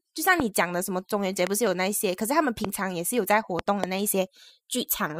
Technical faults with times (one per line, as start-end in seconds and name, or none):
0.40-0.42 loud pop
1.47-1.69 loud pop
2.65-2.67 loud pop
3.59-3.86 loud pop